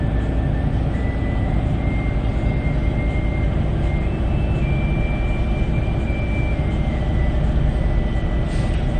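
MP3 compression damage runs through the whole clip, from start to finish. The audio stops dead at about 9.1 kHz, with nothing above it. The damage is plainly audible as a watery, swirling texture where faint detail flickers in and out. This is likely a low-bitrate MP3 encode, consistent with roughly 40 kbps. Starved of bits, the encoder discarded the treble above its cutoff and dropped quiet frequency lines frame by frame, which leaves the swirl and softens transients.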